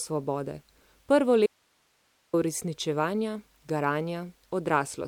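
Speech cuts out abruptly from 1.46 to 2.33 s, leaving only faint hiss roughly 45 dB down: an audio dropout to a faint residue, likely a momentary signal loss upstream with the path still live.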